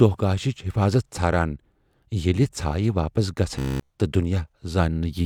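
Speech, in which new audio likely stopped arriving in time from 3.59 to 3.90 s. The last 15 ms or so was looped throughout that stretch, causing robotic sound from repeated short buffers: a rigid, metallic buzz fixed at 66.8 Hz.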